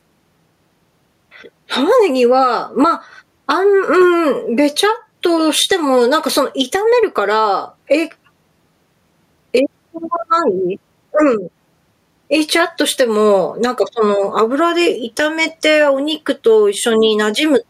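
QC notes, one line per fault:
throughout, gain pumping: level swings by around 10 dB, pressing loud and soft parts together, likely from excessive input gain with a fast limiter clamping each loud sound.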